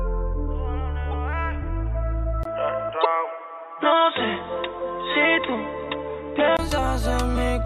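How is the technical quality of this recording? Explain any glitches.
The recording has three clear glitches: two short decoding bursts and a stretch where the sound loses bandwidth.

At 1.11–1.17 s and again at 3.01–3.05 s, a corrupt frame was decoded. Damaged bits across a few frames misplace spectral energy, so each event is a brief chirpy burst. The first is moderate and the second is much louder, peaking around -5 dBFS.

From 2.43 to 6.59 s, the input was likely switched to a poorer device. The sound turns dull, with nothing above 3.8 kHz and new background noise about 30 dB down. There is a 20 ms gap at the switch, but the level barely changes.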